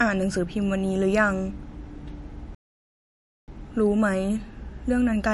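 From the first moment to the last, the speech has that watery, swirly edge of MP3 compression. The s sounds chirp and smear because weak high-frequency detail flickers in and out from frame to frame. The damage is plainly audible. It most likely comes from an encoder starved for bits, and the sound fits a low bitrate of around 48 kbps.

At 2.55 s the audio stops dead mid-flow and stays silent until 3.48 s, a gap of about 0.93 s, before carrying on. That's a playback stall: the player ran dry of data or its thread got held up, so the output fell silent until it caught up. The likely culprit is a buffer underrun or a blocked playback thread.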